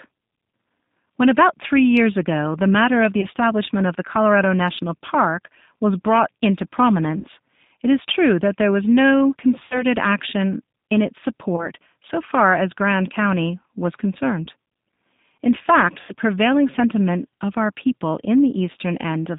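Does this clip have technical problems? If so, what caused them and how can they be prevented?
Yes. The whole recording passes through the G.729 codec (the G.729A variant at 8 kbit/s) on a telephone-band line of roughly 150 Hz to 3.7 kHz. The speech is rebuilt from a vocal-tract filter, a pitch predictor and a few pulses per frame, so it sounds plainly rough and synthetic. A simple low-pass telephone line would only sound muffled. Using a wideband codec at a higher bitrate prevents this.

VoIP packet loss concealed by the speech codec occurs at 3.21, 7.18, 9.65, 11.56, 14.45 and 16.01 s. The missing stretches last 20, 60, 60, 20, 20 and 80 ms. The decoder fills each gap by extending its last pitch and filter, which produces a buzzy tone or coloured noise that fades rather than a silent dropout. Weak, distorted speech persists briefly afterwards, for example at the start of "action in its" after "that there was no", and at the start of "prevailing sentiment of our". 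A jitter buffer, redundancy or forward error correction on the network path prevents this.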